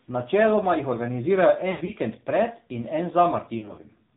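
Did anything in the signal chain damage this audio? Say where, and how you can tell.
Yes. The damage is at the codec stage: the AMR narrowband mobile codec. Nothing above 4 kHz survives, and the speech has a buzzy, synthetic edge throughout. That comes from the vocal-tract model coarsely driven by pulses, and the degree of coarseness fits a low mode around 7.4 kbps.

The network stage also dropped speech, seen as lost AMR speech frames from 1.72 to 1.91 s and from 3.58 to 3.81 s. In each, about 100 ms is concealed. The first has an 80 ms run that drags out and fades, and the second has shorter gaps, none longer than 40 ms, heard as brief warbles.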